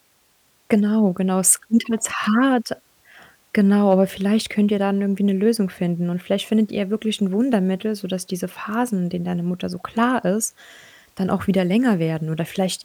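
Hard clipping appears at 1.47 to 1.52 s, where the speech peaks are driven about 4 dB past what the signal path can carry, so their tops are sliced flat. Those squared-off crests add harmonics high in the spectrum, heard as a brief gritty crackle on the loudest part of the sound. A milder instance follows at 3.90 to 3.94 s, overdriven by about 1 dB, giving a fainter, shorter tick of distortion on that peak.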